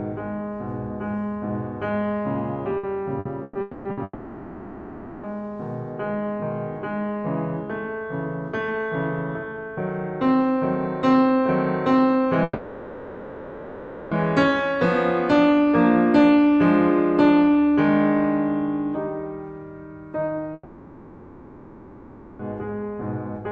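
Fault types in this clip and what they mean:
repeated packet loss (robotic sound): From 2.77 to 4.0 s, packets went missing or arrived late four times in quick succession, the longest hole 120 ms. Each was patched by extending the previous sound, so about a quarter of that span is filler: choppy music with pieces missing.
long network dropout: The music cuts out four times, for between 0.24 and 1.9 s, the longest from 20.53 to 22.42 s, likely because no audio arrived at all. The last sound lingers as a fading buzz, and the music resumes with that stretch gone.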